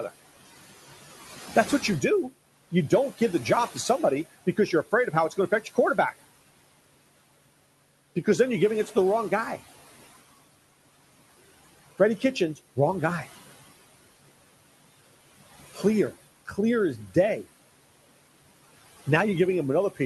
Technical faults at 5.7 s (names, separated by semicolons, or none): noise suppressor artifacts; speech cut by the noise suppressor